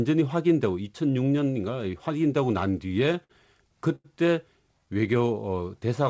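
From 2.88 to 3.31 s the speech catches and drags, stuttering four times as sounds are briefly held in place. These are repeated stalls (stutter): packets reached the receiver late, so its jitter buffer kept running dry, and each time it extended the last sound until fresh audio arrived. About 96 ms was filled in this way, the longest single gap 56 ms, roughly a fifth of that stretch, with nothing actually lost.

At 3.95 s a sound hangs on for a moment too long before the speech resumes, at 4.06 s, exactly where it left off. This is a short stall from a late packet: one packet was missing at its playout time, the buffer emptied, and the receiver stretched the preceding sound for 89 ms to bridge the wait. The playout delay grew by those same 89 ms.

Between 4.79 and 5.18 s the speech slows to about 89% of its normal speed while the pitch stays put, giving drawn-out sounds. This is a jitter buffer slow-down: to rebuild its reserve, the receiver repeated individual pitch periods several times over, adding about 53 ms. 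Throughout, the G.722 call path leaves nothing above 8 kHz.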